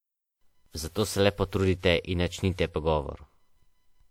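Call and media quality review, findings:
Generation loss, throughout. Likely repeated lossy transcoding, around four passes, consistent with a WMA chain near 96 kbit/s. Each re-encode requantises on a shifted frame grid, so noise and spectral holes stack. Speech sounds swirly, hollow and smeared, with blurred consonant attacks. Band still extends to 20.1 kHz.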